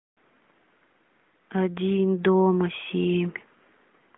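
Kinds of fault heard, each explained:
No faults are heard in this speech. The sound carries the narrow mobile-phone band of an AMR narrowband mobile codec, roughly 200 Hz to 3.6 kHz, with only light coding texture that fits its 12.2 kbps mode.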